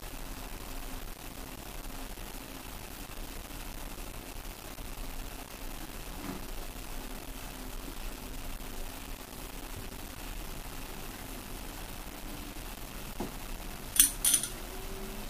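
Throughout, grainy distortion rides on the audio about 10 dB below it, changing as the sound changes. That points to low bit depth without dither, likely rounding to 7 bits. Unlike a dithered requantisation's steady hiss, this error tracks the signal, so quiet passages turn gritty.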